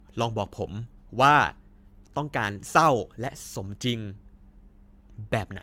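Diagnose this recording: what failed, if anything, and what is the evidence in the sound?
Generation loss throughout, codec stage: hollow, swirly speech with smeared attacks, likely from about seven AAC-LC re-encodes, each requantising on a shifted frame grid.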